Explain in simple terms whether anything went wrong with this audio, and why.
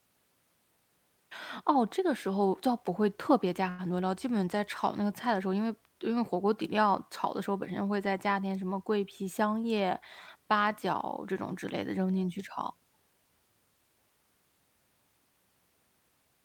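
Around 3.69 to 3.81 s there's a short stall from a late packet: the speech gets held for about 95 ms while playback waits, then continues without losing anything.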